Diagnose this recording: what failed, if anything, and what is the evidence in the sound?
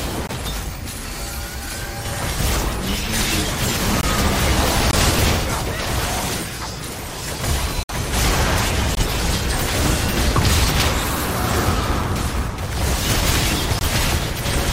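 A block size mismatch (truncated) sits at the driver or buffer stage across the whole clip: a steady 109 Hz buzz and audio running 1.16 times fast at normal pitch. That fits a 512-sample written block whose tail is discarded each time. A resampling fault would have shifted the pitch as well.

The corrupt frames muted belong to the codec stage. There are abrupt silent holes at 0.27–0.32 s, 4.01–4.05 s, 4.91–4.94 s, 7.83–7.92 s, 8.95–9.03 s and 13.79–13.83 s, each one or more frame lengths long. These are true silence rather than concealment smearing, and the surrounding timing stays intact, unlike a network dropout.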